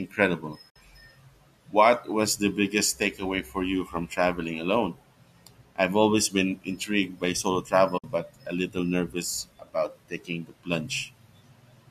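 At 0.70 to 0.76 s and again at 7.98 to 8.04 s, the speech drops out for about 60 ms each time. This is AAC frame loss with muting: the decoder zeroed the missing frames, and the overlapping windows fade the sound out and back in. Unlike a hard dropout, the holes have soft edges.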